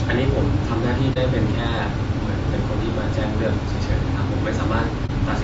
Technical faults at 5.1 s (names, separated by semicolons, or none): low-delay AAC compression; AAC frame loss with muting